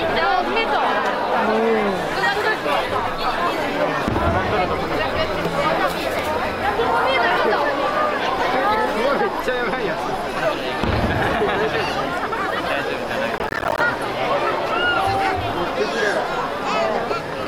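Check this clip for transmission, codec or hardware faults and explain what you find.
There is one fault: a burst of processor overload crackle from 13.38 to 13.8 s. For about 0.4 s, the processor could not finish each short audio buffer before its deadline, and it missed many deadlines in a row. Each missed buffer came out as a short silent gap with hard edges. The spacing suggests buffers of around 10 ms and roughly twenty misses. Together they sound like a gritty, tearing crackle over the sound, and it stops once the load clears.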